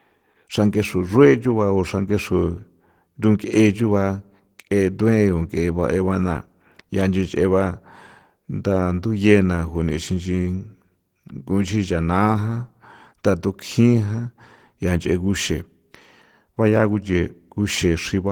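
Opus voice compression runs from start to finish. The coder splits the speech band: a linear-prediction layer carries everything below 8 kHz, and a transform layer codes the top, which still reaches about 20.2 kHz. The excitation is quantised so coarsely that the damage is plainly audible, giving the speech a hoarse, slightly robotic grain. This points to a bitrate around 16 kbps in hybrid mode with 20 ms frames.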